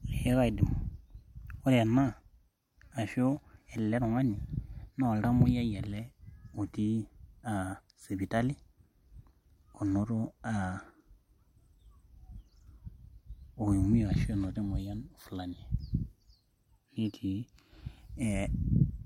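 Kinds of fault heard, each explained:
No technical faults can be heard in this speech recording. Nothing calls for a line of its own.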